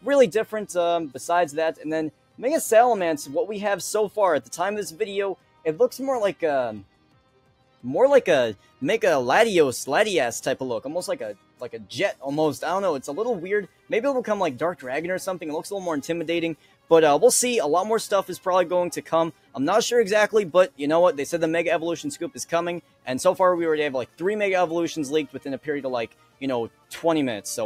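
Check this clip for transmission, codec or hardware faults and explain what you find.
One fault runs through the whole clip: a speech-oriented noise suppressor is acting on non-speech sound. It also produces seven distinct dips where the suppressor cut harder.

Noise suppressor applied to music or sounds: From start to finish the level swings by around 5 dB. A suppressor built for speech treats sustained, steady content as background noise and pulls it down, while sharp onsets pass before it reacts. The sound therefore pumps and thins, with attacks intact and held parts sagging. A compressor's pumping follows overall loudness, but this follows how steady the sound is.

Sound cut by the noise suppressor: Dips occur at 1.75–2.4 s, 4.42–8.81 s, 11.35–11.61 s, 13.68–13.9 s, 16.56–16.9 s, 19.32–20.79 s and 22.81–26.91 s. In each, sustained or decaying material drops by up to about 12 dB, with the deepest about 11 dB at 13.68 s. 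The affected parts total well under a second in most spans, and about a second or more within the longer 4.42 s and 22.81 s stretches. Tails are clipped short while transients survive, which separates this from packet loss: nothing goes silent or glitches, the sound just sinks.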